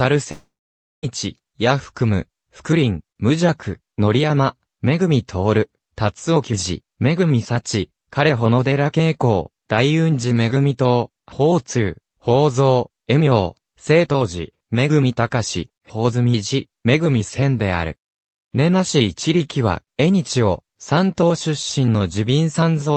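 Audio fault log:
0.31–1.05 s, long network dropout: the sound carries on briefly as a fading buzzy smear, then goes silent for roughly half a second before resuming at 1.05 s, and about 0.72 s of material never comes back. That pattern is most likely a stretch of lost packets, with the receiver stretching the last audio it had until concealment gave out. Around it, the call path's usual coding texture and top end near 8 kHz fit a wideband Opus stream.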